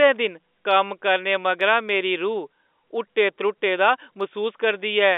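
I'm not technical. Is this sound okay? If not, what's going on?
Yes, no faults here.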